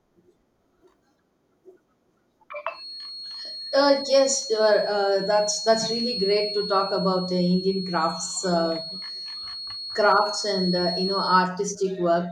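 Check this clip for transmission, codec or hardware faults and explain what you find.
There's one fault here, a feedback whistle. From 2.68 s to 11.50 s a thin 4.3 kHz tone sits roughly 10 dB under the speech, swelling and fading slowly in level. It's likely the loudspeaker-to-microphone loop hovering right at the edge of feedback, so it rings steadily without building up.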